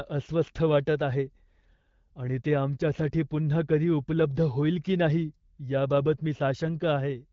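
Listening through this speech recording, carried over the AMR wideband (HD Voice) codec at a quality that fits a 12.65 kbit/s setting, nothing stood out as a technical problem.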